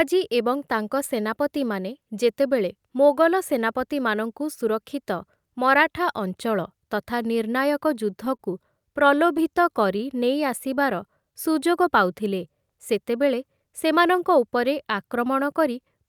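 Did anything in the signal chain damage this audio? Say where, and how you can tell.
Yes, at the network stage. A short stall from a late packet at 8.36–8.41 s holds one sound about 29 ms too long. On a spectrogram it appears as smeared, frozen harmonics.

From 8.79 to 9.40 s, repeated stalls (stutter) produce five brief holds totalling 46 ms, the longest 11 ms. They show as small repeated-cycle plateaus in the waveform.

A jitter buffer slow-down from 9.43 to 11.54 s plays at 94% speed, adding 136 ms of repeated pitch periods. Formants stretch horizontally while pitch stays unchanged.

A jitter buffer speed-up from 13.57 to 14.56 s runs at 108% speed, trimming about a tenth of a second. Syllables look compressed, with no pitch shift.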